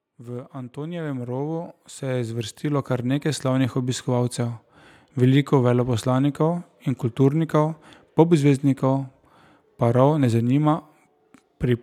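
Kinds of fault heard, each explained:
Automatic gain rising: the automatic gain control judged the incoming level too low and raised its gain gradually rather than in one step, so the whole signal grows louder over several seconds. In this speech clip the level climbs by about 15 dB from 0.17 s to 4.1 s, and because the gain applies to everything, the voice and the background noise swell up together.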